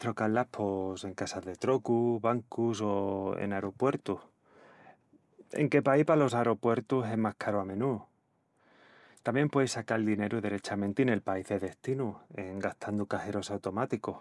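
No technical faults occur at any point in the recording.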